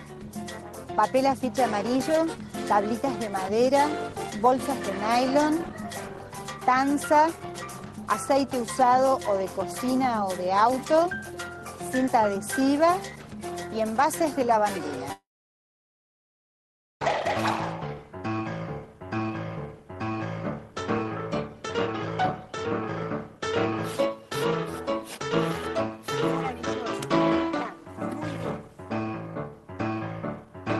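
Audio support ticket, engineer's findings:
Long network dropout, likely in transport, 15.12–17.02 s: concealment extends the last sound as a fading buzz, then roughly 1.8 s of silence; audio resumes with that stretch lost.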